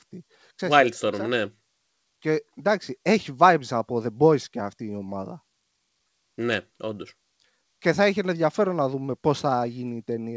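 Throughout the speech, there is clock drift between sender and receiver. The sender's clock runs about 3 percent slow. The jitter buffer keeps draining. The receiver must stretch what it has to keep playing. Small timing hiccups recur at uneven intervals.

From 0.24 s to 10.2 s come repeated timing corrections. The receiver keeps repeating short pieces to fill the gaps. The effective pace sits at 97 percent. Roughly a third of a second is added overall. It sounds like a slightly unsteady, dragging tempo. The G.722 call path leaves nothing above 8 kHz.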